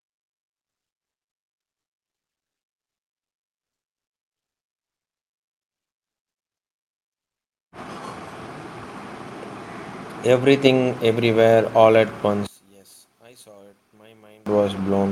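A speech recording carried over an Opus call path, with its band topping out near 12 kHz, shows two faults. From 5.72 to 8.79 s a jitter buffer speed-up runs the speech at about 107% of normal rate with pitch unchanged. The receiver trimmed short pitch-period slices to drain excess buffered audio, roughly a fifth of a second in total, so the delivery sounds hurried. From 12.47 to 14.46 s, right after "everywhere all at", the level falls by about 28 dB and only a faint residue remains. The likely cause is one channel inverted: the centred speech cancels when the opposite-polarity channels are summed to mono.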